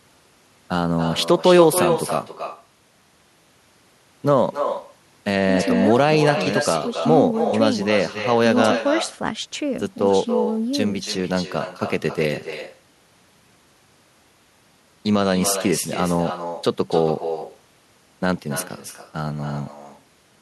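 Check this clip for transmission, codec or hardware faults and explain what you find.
The far end is playing the call over a loudspeaker and no echo canceller removes what its microphone picks up, so this speech returns after the network round trip throughout the clip. Every phrase is shadowed roughly a third of a second later by a thinner copy about 7 dB quieter. This is echo with no canceller.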